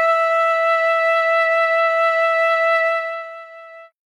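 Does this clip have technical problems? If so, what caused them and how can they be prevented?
No, nothing in this one calls for a fix, so there's nothing to prevent.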